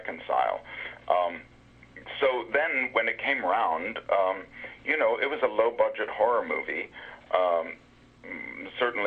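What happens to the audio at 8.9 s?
Nothing goes wrong at 8.9 s; the audio plays through that moment intact, with no dropout, click or distortion.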